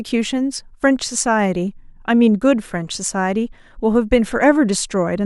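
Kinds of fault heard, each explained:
Nothing stood out on listening to the speech in this clip.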